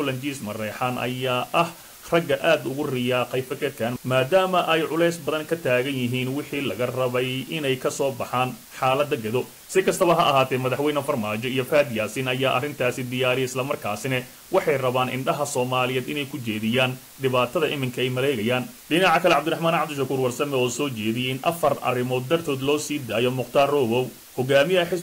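Low bit depth with dither runs from the start of the clip to its end. Each sample is held at only 6 bits, and random dither is added before rounding to that coarse grid. This turns the rounding error into a broadband noise floor that does not depend on the signal. It sits only around 20 dB below the sound, so a constant, even hiss lies over everything. The dither keeps it free of gritty distortion.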